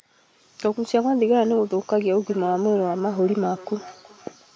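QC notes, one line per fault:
2.2 to 4.56 s, feedback echo between two devices: from here each bit of speech comes back roughly every 0.4 s, peaking about 20 dB under the speech. Two devices in the room share the call, and each one's echo canceller ignores the other's playback, so it loops.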